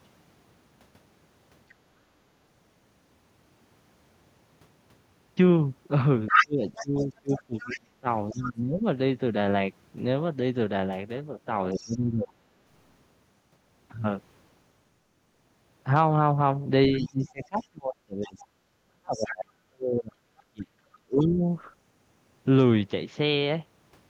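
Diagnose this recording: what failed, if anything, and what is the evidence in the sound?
A second voice bleeds in at 6.27–8.48 s, nearly as loud as the speech, then faintly at 11.74–11.95, 16.98–19.25 and 20.41–21.27 s. This is the other side's voice leaking through, likely residual echo missed by the call-processing echo canceller.

The speech drops sharply, by up to roughly 35 dB, at 6.42–8.84, 11.73–12.38 and 16.93–21.43 s, overlapping that voice. This is speech suppressed in double talk: the canceller likely ducks the whole signal.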